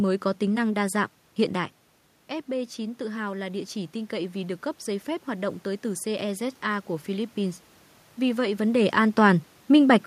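Automatic gain rising runs from 2.51 to 7.36 s. After the speech level falls by about 9 dB when the talker moves back around 1.5 s, the gain control slowly adds about 6 dB, so voice and room noise swell up together.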